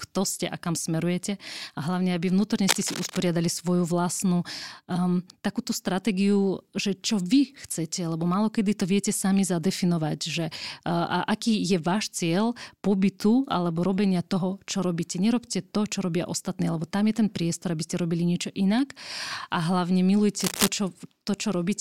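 Scratchy, rustling bursts of cable scratch noise cut across the speech from 2.64 to 3.29 s, a little below the speech level, just before "svoju vlastnú um takúto", and again from 20.40 to 20.68 s at about the speech level. A worn cable or connector being moved, with its contact resistance jumping erratically, is the likely cause.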